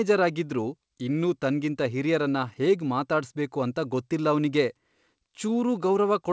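No faults in the speech; the WebRTC call path carries it as expected, with nothing above 8 kHz, consistent with a wideband call codec such as G.722.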